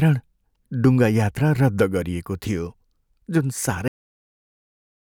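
A speech recording that stops abruptly at 3.88 s: the sound is chopped off mid-utterance and falls straight to digital silence, with no natural decay, and that dead silence runs to the end of the file. This is a cut-off end. The final stretch of audio was never written out or played back, so the stream simply halts where the last buffer that did get through ends, leaving the tail of the speech missing.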